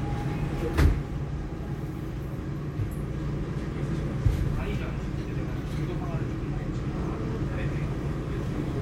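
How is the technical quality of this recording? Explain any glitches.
The recording has one recurring glitch. Periodic USB or driver dropouts, every 1.0 s from 0.34 to 8.35 s: a blocked bus skips a fraction of a millisecond of audio, heard as regular ticks.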